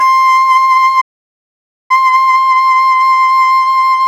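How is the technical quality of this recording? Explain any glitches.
The recording has one clear glitch, a playback stall in the music. From 1.01 to 1.91 s the player likely ran out of data, so the output cuts to silence for about 0.89 s before the music resumes.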